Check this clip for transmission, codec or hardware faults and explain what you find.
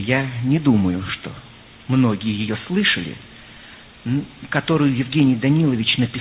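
No transmission, codec or hardware faults turn up in the clip.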